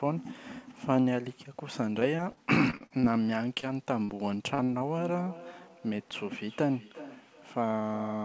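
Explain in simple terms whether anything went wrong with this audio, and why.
Repeated packet loss (robotic sound), 2.0 to 3.05 s: eight bits of audio went missing in quick succession, each patched by stretching the previous sound, so it turns choppy and robotic.

Short concealed packet loss at 3.55, 3.60, 4.04, 4.55, 4.64 and 4.78 s: brief pieces arrived too late, and the receiver filled each hole with a guess, leaving small smears or wobbles.

Feedback echo between two devices, from 4.97 s to the end: two devices share a room and the call. One replays what the other's microphone sends, so the sound returns roughly every 0.4 seconds.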